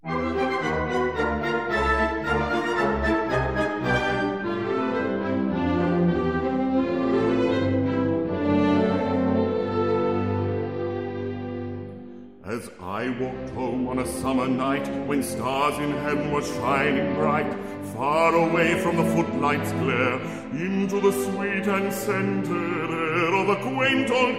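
From 14.64 to 15.18 s the sound speeds up 5.2% and rises 88 cents, then snaps back: likely a drift correction step resampling to rebalance a buffer.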